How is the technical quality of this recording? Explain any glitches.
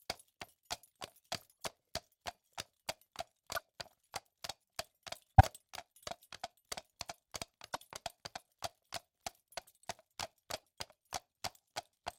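The recording is marred by six corrupt frames decoded: 1.51–1.66, 3.55–3.62, 5.38–5.46, 7.66–7.81, 8.95–9.01 and 10.56–10.65 s. Flipped bits misplace energy in the spectrum, producing brief chirps or noise bursts, loudest near 5.4 s and faintest near 10.6 s. They appear as short, blocky vertical smears on a spectrogram.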